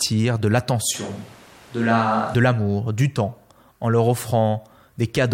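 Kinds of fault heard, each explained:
Switch to a distant microphone: from 0.95 to 2.34 s the speech abruptly turns roomy, hollow and thin in the bass, with background noise about 25 dB below it at an unchanged level, starting just before "du temps en leur" and snapping back at 2.34 s. The close microphone likely dropped out.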